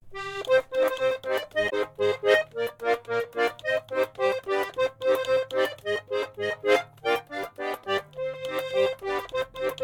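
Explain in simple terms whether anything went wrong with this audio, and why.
At about 1.66 seconds the music is broken by a short chirp, squawk, click or brief gap lasting around 70 milliseconds, ending near 1.73 seconds. This is damaged data in a compressed stream. A small piece of the stored file was corrupted, so the player misread that stretch, lost its place, and had to hunt for the next clean chunk of audio before the music could continue normally.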